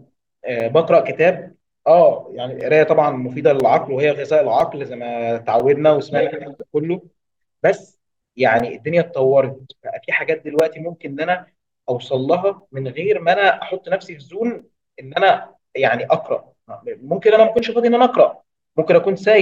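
Periodic USB or driver dropouts run from 0.6 to 18.59 s, once every second: a blocked bus or driver leaves roughly 4 ms silent gaps, heard as regular ticks during speech.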